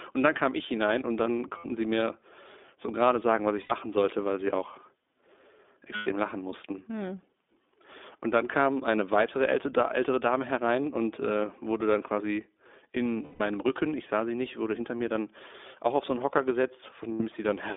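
The iLBC codec runs through the whole clip. It squeezes the speech into a narrow band of roughly 250 Hz to 3.6 kHz and codes each short frame independently. The result is a plainly rough, slightly synthetic texture, which fits iLBC's 15.2 kbps mode with 20 ms frames.

Lost iLBC frames occur at 1.58–1.66 s, 3.62–3.72 s, 5.96–6.08 s, 13.22–13.40 s and 17.12–17.23 s, with gaps of 60 to 180 ms. The decoder fills each gap by repeating the last pitch cycle mixed with noise, which sounds like a held, buzzy vowel. The longest gap, 180 ms, fades. The voice is right again almost immediately after each gap.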